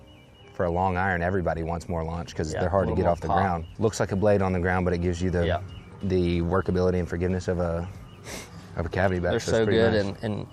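No technical faults can be heard in this audio.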